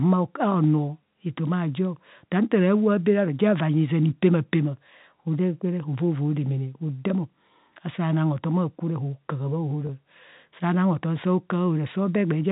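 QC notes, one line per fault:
9.87 to 9.89 s, packet loss with pitch repetition: right after "akwo ne hokaha" about 20 ms drops out, bridged by a repeated pitch period, so it sounds like a brief held buzz.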